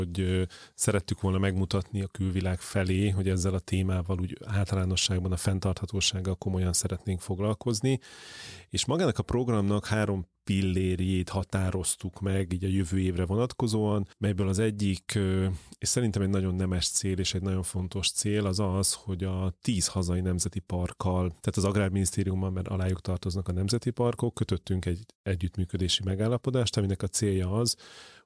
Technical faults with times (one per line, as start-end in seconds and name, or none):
none